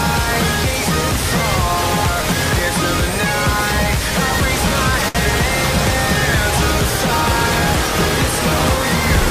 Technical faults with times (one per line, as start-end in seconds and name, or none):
5.08-5.17 short stall from a late packet